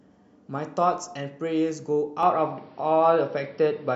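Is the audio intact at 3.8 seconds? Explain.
No. From 2.23 s to the end, the input was likely switched to a poorer device: the speech turns dull, and the spectrogram shows nothing above 5.7 kHz, with a level step of roughly 5 dB.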